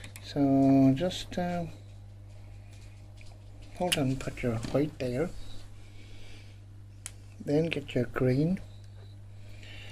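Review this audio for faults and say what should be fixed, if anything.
Mains hum at 50 Hz runs for the whole clip, sitting at roughly 20 dB below the wanted sound. Power-line current is leaking into the signal path, through a ground loop or by induction from a nearby transformer, and adds a steady low tone under everything. On a spectrogram it is an unbroken horizontal line at 50 Hz from start to end; on the waveform, quiet stretches show a regular 20 ms ripple instead of flat silence. It should be fixed at the source: use balanced cabling, a single common ground point, and keep signal leads away from transformers and power supplies.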